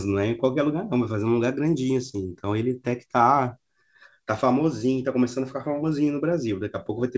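Clock drift between sender and receiver runs through the whole clip: the sender's clock is roughly 2% slow, so the receiver's jitter buffer keeps draining. The timing simply keeps slipping the same way.

From 0.06 s to 6.61 s come repeated timing corrections, as the receiver repeats short slivers to stay in step. Playback sits at 98% speed, stretching that stretch by around 150 ms. The result is faint, unevenly spaced hiccups and a slightly dragging tempo. Above it all, the band stops at 8 kHz, consistent with a wideband call codec such as G.722.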